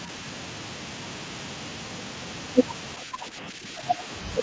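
A speech recording, carried over a call path with nothing above 8 kHz. From 3.04 to 3.99 s the talker dips by about 5 dB, in pieces totalling under a second. This is likely speech suppressed in double talk, with the echo canceller ducking both sides.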